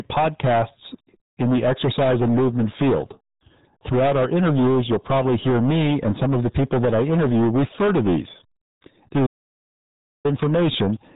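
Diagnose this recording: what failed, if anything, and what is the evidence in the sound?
Hard clipping at the converter or sample-format stage: the speech was driven about 14 dB past full scale for the whole clip, so roughly a fifth of the samples sit flat against the rails. The waveform shows squared-off peaks, and the spectrogram shows harmonic smear above voiced sounds, heard as constant harsh fuzz.

The RealAudio 14.4 codec stage then reduced everything to a narrow, gargly band. The spectrogram shows a hard ceiling at 3.8 kHz with nothing above it, and heavy codec artefacts within the band. That fits an 8 kbit/s stream built for dial-up modems.

An audio dropout to silence runs from 9.27 s to 10.25 s, about 0.98 s. The speech cuts out to silence, with no room tone, then resumes mid-flow. It appears as a flat line in the waveform and a blank column in the spectrogram, likely from a lost input link while the recorder kept writing silence.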